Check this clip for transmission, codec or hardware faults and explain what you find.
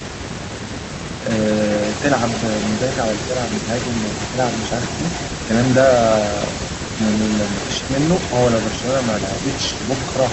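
Two faults are audible in this speech: an echo leak running through the whole clip, and three brief dips in the talker's level where speech is suppressed in double talk.

Echo leak, from start to end: a faint delayed copy of the speech trails it by about 0.29 s, sitting roughly 15 dB below the direct voice. The likely cause is a far-end loudspeaker whose echo canceller let part of the returning signal back into the call.

Speech suppressed in double talk, at 1.22–1.26 s, 5.46–5.50 s and 9.73–9.81 s: the talker briefly drops by a few dB for a few tens of milliseconds, likely because the echo canceller mistook overlapping sound for echo and attenuated the speech along with it. Through the Opus call path, the audio's bandwidth tops out near 8 kHz.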